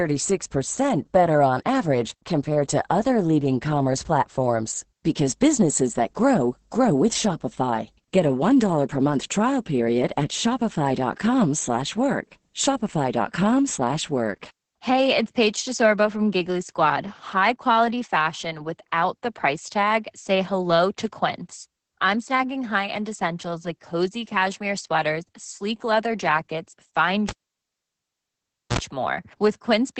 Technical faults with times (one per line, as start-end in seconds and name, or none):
0.00-30.00 Opus voice compression
27.29-28.79 cable pulled and plugged in